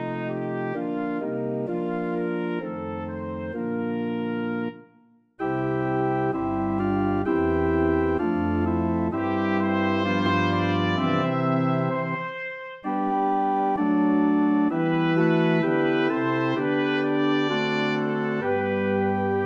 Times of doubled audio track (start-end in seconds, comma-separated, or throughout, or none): 10.26-13.76